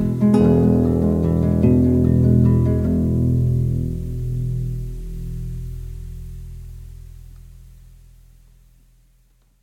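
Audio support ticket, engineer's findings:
Listened to the full music clip and found nothing that warrants a finding or points to a component for follow-up.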